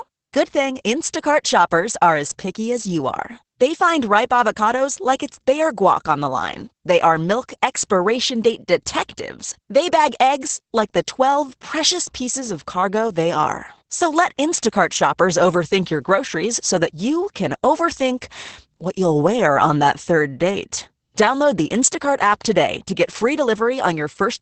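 Throughout the speech, Opus voice compression in SILK mode is heard. Nothing survives above 8.7 kHz, and the coarsely coded excitation leaves the voice hoarse and faintly robotic, which fits about 10 kbps. A plain low-pass filter would muffle without that roughness.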